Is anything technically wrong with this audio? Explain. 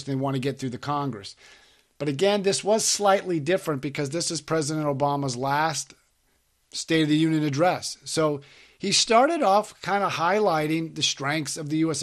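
Yes. Throughout the speech there is plainly audible damage, likely from MP2 compression at a low rate, around 80 kbps. Starved of bits, upper sub-bands drop out and flicker while the rest are coarsely quantised, giving dull, gurgling, granular speech. A spectrogram shows missing, patchy high-frequency blocks.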